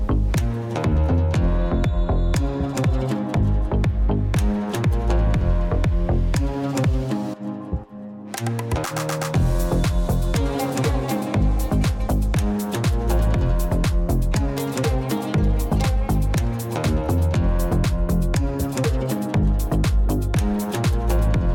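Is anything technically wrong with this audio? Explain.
No, nothing technically wrong can be heard here.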